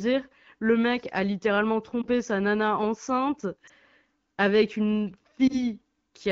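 Brief dips and warbles at 2.01–2.06 s after "le mec a littéralement", 3.67–3.72 s after "sa nana enceinte", and 5.47–5.63 s after "avec une" are lost AMR speech frames. Each time, a single corrupted 20 ms frame was replaced by repeating the previous pitch and vocal tract settings at reduced gain, over clean wideband speech that fits AMR-WB at 12.65 kbit/s.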